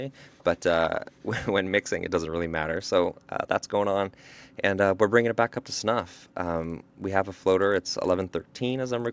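From 5.88 s to the end of the speech, a low buzz rides on the signal. This is a resampler restarted on every block. Each 20 ms block was converted on its own, with no memory of its neighbours. The edges of every block therefore carry a small error. Those errors repeat at 50 Hz, so they fuse into a rough buzz rather than separate ticks. It sounds only while speech is present. The conversion points to a 24 kHz to 16 kHz change.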